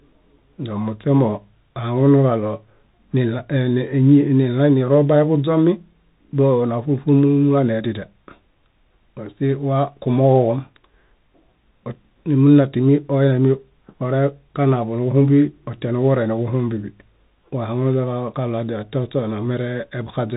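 Speech runs through a Bluetooth CVSD headset codec for the whole clip. Nothing above 3.8 kHz survives, so it sounds muffled and narrow. The one-bit up-or-down coding, which fits a 64 kbps stream, can't track sharp peaks. S sounds turn scratchy, and a granular hiss sits underneath.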